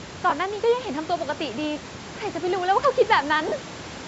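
Lost LE Audio frames twice break the speech stream: at 0.30–0.32 s, a gap of about 20 ms, and at 3.48–3.52 s, about 40 ms, which fits two and then four 10 ms frames. The decoder patches each gap with recycled spectrum, so the speech briefly turns into a noisy smear.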